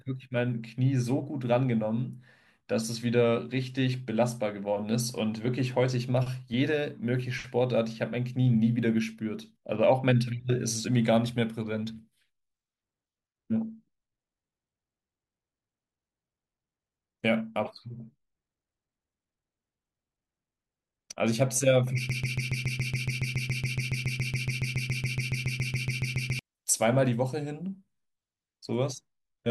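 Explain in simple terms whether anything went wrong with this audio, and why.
A broken-record loop runs from 22.10 to 26.39 seconds. For over four seconds, the same tiny scrap of speech, about 140 milliseconds long, repeats back to back roughly 31 times, making a stuttering sound. The likely cause is a stall somewhere in playback or streaming: it stopped receiving new audio and kept replaying the last fragment it held. Whatever was said during those four seconds is lost.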